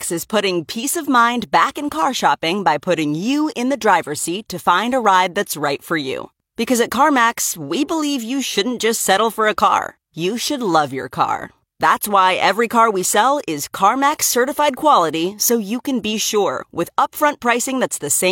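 No dropouts, clipping, glitches or level jumps turn up anywhere in the recording; nothing to flag.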